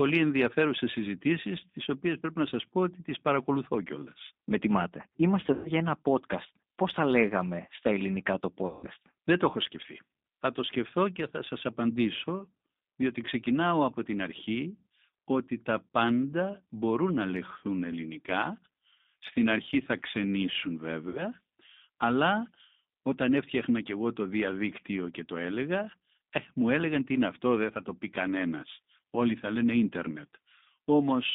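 Throughout the speech, a G.729 codec (the G.729A variant) shapes the sound, and the roughness fits its 8 kbit/s coding. The voice is rebuilt from a vocal tract filter, a pitch predictor and a few pulses per short frame, so it comes out plainly rough and slightly synthetic. On a spectrogram the band runs from about 200 Hz to a hard ceiling near 3.7 kHz, with nothing above it.

At 5.53 to 5.72 s, just before "ένα podcast", VoIP packet loss concealed by the speech codec covers about 120 ms of missing audio. The decoder extends the last pitch and filter into a buzzy tone or coloured noise that fades, and the voice stays weak briefly as the frames recover. A spectrogram shows smeared, repeated harmonics, and the waveform shows a decaying envelope. The same happens at 8.67 to 8.87 s after "λέγαμε στα ελληνικά το", this time covering about 160 ms, and at 21.09 to 21.30 s after "αρχή θα ξενήσουν", covering about 60 ms.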